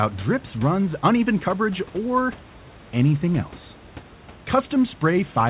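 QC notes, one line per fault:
No faults to note.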